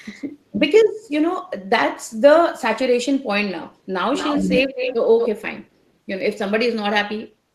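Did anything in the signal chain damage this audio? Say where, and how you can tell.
Yes, an echo leak in call processing: from 4.16 to 4.95 s and again at 5.19 to 5.28 s, a copy of the speech returns 231 ms late, about 5 dB quieter than the original. This is likely a far-end loudspeaker echo the canceller failed to remove. Unlike room reverberation, it is a distinct delayed repeat.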